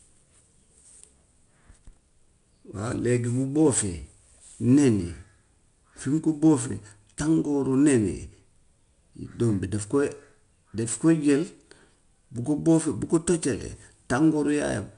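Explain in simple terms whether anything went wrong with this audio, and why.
4-bit ADPCM compression affects the whole speech clip. Each sample is coarsely coded, adding clearly audible gritty hiss on loud parts, and nothing remains above 10.6 kHz.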